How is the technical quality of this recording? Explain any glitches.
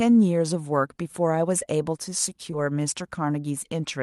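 Two short glitches interrupt the speech, on top of the band-limited sound of a call codec whose top end stops near 12 kHz, as Opus does at a moderate bitrate.

Short concealed packet loss occurs twice, at 1.59–1.63 s and 2.51–2.54 s. Each time about 20 ms of audio arrived too late, and the receiver extrapolated from the preceding sound before blending back. The result is a brief smear or wobble.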